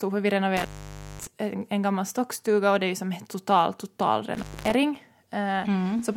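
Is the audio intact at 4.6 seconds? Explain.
No. An intermittent contact cuts the speech from 4.34 to 4.74 s. A loose connection opens for 229 ms, leaving a near-flat waveform gap bordered by crackle spikes.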